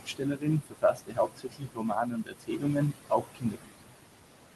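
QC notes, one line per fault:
Throughout: noise suppressor artifacts. The suppressor pulls the steady background down by about 21 dB frame by frame, so the noise floor dips between phrases and swells back under speech. On a spectrogram, residual noise shows as flickering, patchy bins instead of an even haze.
0.00–3.93 s: speech cut by the noise suppressor. The suppressor mistakes quieter parts of the speech for noise and turns them down with the room noise, which sits only about 9 dB below the voice. Drops reach about 22 dB across roughly three seconds in total, so the affected speech sounds swallowed or faint. On the waveform, those passages show sudden narrow envelopes, and on the spectrogram, energy above the voiced bands gaps out.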